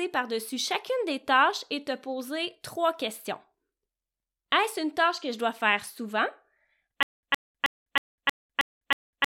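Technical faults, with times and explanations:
7.03 s to the end, stutter with silent gaps: a 115 ms fragment of the speech repeats seven times, each followed by about 201 ms of digital silence. It recurs every 317 ms. This is likely a stalled stream replaying its last buffer. The missing speech is lost.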